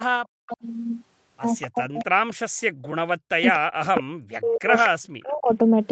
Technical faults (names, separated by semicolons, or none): echo leak; speech suppressed in double talk